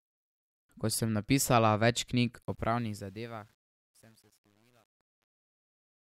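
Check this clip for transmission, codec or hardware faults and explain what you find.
One processing fault shows up, in the fade-out that begins at about 2.4 s. From 2.42 s, just after "sem napisala več knjig", to 6.06 s, there is truncation distortion on a fade. The stage drops low bits without dither, which fits roughly 9-bit resolution. From 2.98 s the tail turns gritty. Unlike dropouts, the grit worsens steadily as the level falls.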